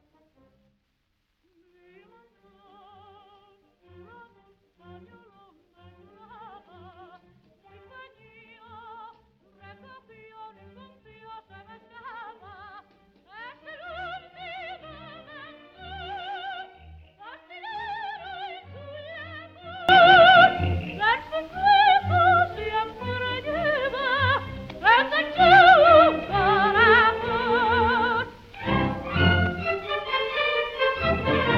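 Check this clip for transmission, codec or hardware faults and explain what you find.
One fault is present. From 0.0 to 19.89 s the sound drops by about 23 dB, as if the centre has been scooped out. The likely cause is one channel inverted. With one stereo channel in reversed polarity, everything common to both sides cancels when they are summed. Centred material nearly disappears. Only the small difference between the channels survives, which gives this faint, weak copy.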